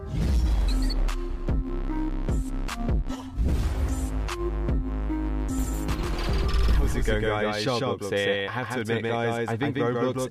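From 5.58 s to the end, a doubled audio track appears. A second, equally loud copy trails by roughly 150 ms, likely from an out-of-step duplicate path.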